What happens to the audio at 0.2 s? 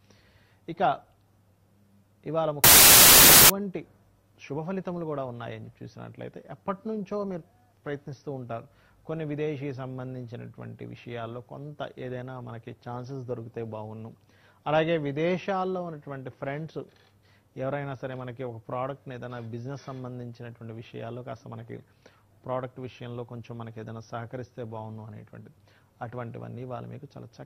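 Nothing goes wrong at 0.2 s; the audio plays through that moment intact, with no dropout, click or distortion.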